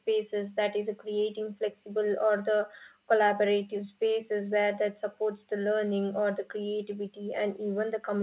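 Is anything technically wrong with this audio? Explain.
No, this speech carries no technical fault, and its content stops at 4 kHz, which fits a narrowband telephone codec such as G.711 on an ordinary call path.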